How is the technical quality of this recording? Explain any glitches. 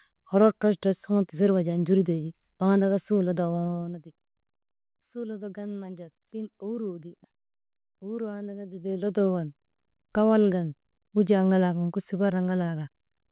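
The speech is cut off above 4 kHz, which fits a narrowband G.711-style call path. One glitch stands out. From 8.73 to 9.22 s there is zipper noise. The level changes by about 15 dB in 1 dB steps, around 30 a second, with no smoothing. Each step leaves a tiny click, heard as a brief ticking zip over the speech.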